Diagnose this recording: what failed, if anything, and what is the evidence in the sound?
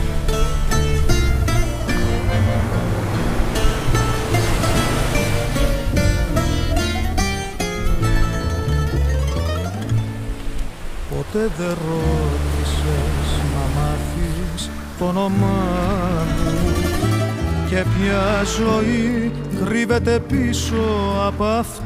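Nothing failed here as far as I can hear, since no stage from the wiring through to playback leaves any mark on the sound.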